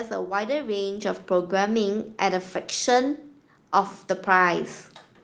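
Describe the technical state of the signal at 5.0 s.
At 5.0 s the speech signal is intact, with no audible technical fault.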